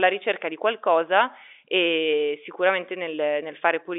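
Nothing stood out on listening to this telephone-band speech recording.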